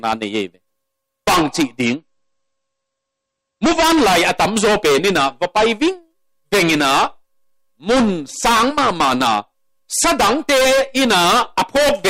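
From 1.84 to 3.84 s the audio drops to an adaptive stream at a lower bitrate: the top end vanishes above about 8.3 kHz and artefacts thicken, then quality snaps back with no gap. That sudden two-second dip points to a slowed connection forcing a switch from roughly 128 down to 32 kbit/s MP3.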